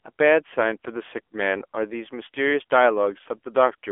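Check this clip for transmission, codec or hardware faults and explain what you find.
One codec fault runs through the whole clip. AMR narrowband mobile codec, throughout: the speech has been squeezed into a telephone band of 300 Hz to 3.4 kHz and rebuilt by a vocal-tract model excited by sparse pulses in short sub-frames. The damage is plainly audible, with a buzzy, synthetic edge and a dull, boxy tone with no air above 3.4 kHz, which points to one of the codec's lower modes, around 7.4 kbps.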